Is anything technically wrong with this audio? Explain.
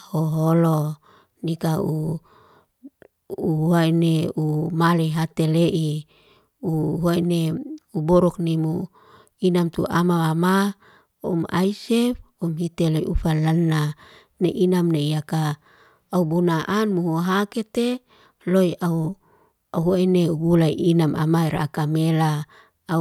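No, nothing technically wrong here.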